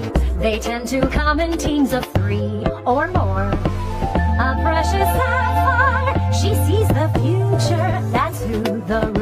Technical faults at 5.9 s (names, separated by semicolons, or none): none